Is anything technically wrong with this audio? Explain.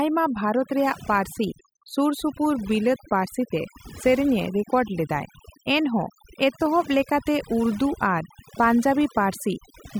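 Yes. Overdone noise removal affects the whole speech clip. A noise reduction stage was set too aggressively. It cuts frequency bands near its noise estimate, taking quiet parts of speech too. The background drops and breaks up into twinkling specks.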